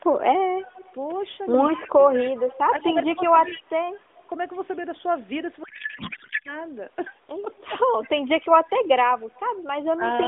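From 0.62 to 4.24 s there's a faint copy of the speech trailing about 190 ms behind, around 20 dB down, likely an echo leak from a far-end loudspeaker the canceller didn't fully clean up. The same delayed shadow comes back more quietly from 7.6 to 8.09 s (about 30 dB down) and again as a brief scrap at 9.35 to 9.4 s (about 35 dB down). Inside that first stretch, 1.71 to 1.99 s, the speech dips by up to about 15 dB in short bites totalling roughly 200 ms, which sounds like speech suppressed in double talk, the canceller ducking both sides. The same happens from 8.01 to 8.61 s, over about 150 ms in total. From 5.64 to 6.58 s the speech turns into garbled warbly noise that barely tracks it: a codec payload misread, with octet-aligned AMR frames decoded as bandwidth-efficient, so every field lands in the wrong place.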